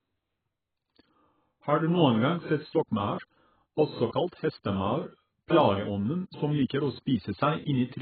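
From start to end the speech is band-limited and smeared: nothing survives above 4.7 kHz, so sibilants lose their edge and sound dull, while vowels carry a watery, warbling texture. This is likely AAC compression, with AAC-LC run at a very starved bitrate, which fits roughly 11 kbps and heavy codec damage. On a spectrogram the energy stops at a flat ceiling near 4.7 kHz, with patchy holes and blotchy frame-by-frame blocks below it.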